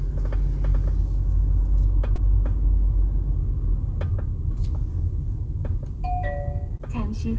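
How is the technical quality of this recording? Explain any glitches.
There are two short dropouts, each patched over, and the audio has clearly come through a call path: nothing reaches above 8 kHz, which points to a wideband codec like G.722.

The glitches are short concealed packet loss, at 2.16 to 2.19 s and again at 6.77 to 6.81 s. Each time about 20 ms of audio arrived too late or not at all, so the receiver invented a fill by stretching the preceding sound forward, then crossfaded back into the real signal. You hear it as a quick smear or wobble where the sound briefly loses its detail.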